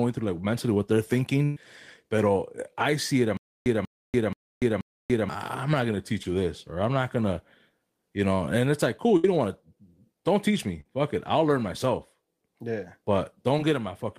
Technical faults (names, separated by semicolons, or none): burst of packet loss; stutter with silent gaps; short concealed packet loss